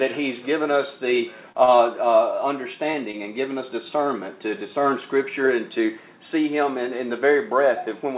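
Short concealed packet loss at 1.52 to 1.56 s, 1.76 to 1.80 s and 2.92 to 2.96 s: each time about 20 ms of audio never arrived, and the receiver covered the gap by extending the preceding sound before blending back, heard as a brief smear or wobble. Short stalls from late packets at 1.64 to 1.70 s and 3.12 to 3.15 s: the jitter buffer ran dry, so the receiver held the last sound for 32 ms and 19 ms until the packet arrived. Nothing is lost, but the sound lingers with a slight buzz or dip. Throughout, the audio stops at 4 kHz, which fits a narrowband call codec.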